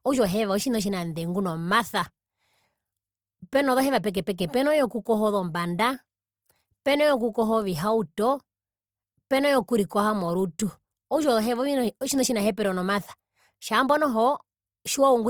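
A speech clip with a rough, grainy texture throughout: upper harmonics sound noisy rather than clean, though the bandwidth stays wide up to 20.3 kHz. This is likely Opus compression in its CELT music mode, with noise-filled bands at a rate that fits about 24 kbps.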